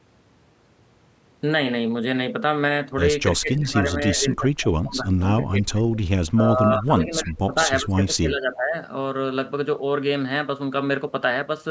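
From 3.38 to 5.82 s and 6.34 to 8.76 s the speech sags by up to about 25 dB, then about 15 dB. This is likely speech suppressed in double talk, with the echo canceller ducking overlapping talk as echo.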